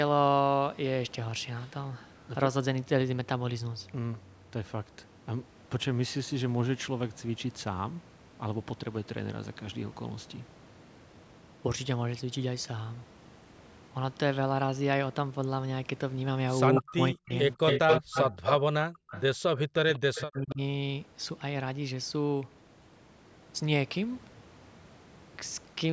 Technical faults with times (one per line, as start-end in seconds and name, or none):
16.75-16.81 echo leak
16.80-18.18 speech suppressed in double talk
17.34-18.61 echo leak
18.90-19.09 background gated by the echo canceller
19.09-19.22 echo leak
19.57-19.61 echo leak
19.92-20.54 echo leak
19.98-20.60 speech suppressed in double talk